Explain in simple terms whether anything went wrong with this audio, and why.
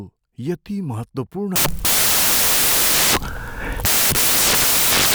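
From 1.56 s to the end, the speech turns into loud hiss: samples built from the wrong bytes. Unlike background noise, it is harsh and loud.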